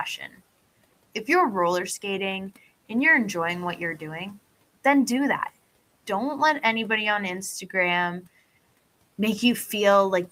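Speech cut by the noise suppressor appears from 0.18 to 0.40 s. The suppressor mistook soft speech for noise and pulled it down with the background, by about 11 dB at its deepest, over roughly a tenth of a second, so that sound comes out swallowed and faint. The room noise sits about 25 dB below the speech.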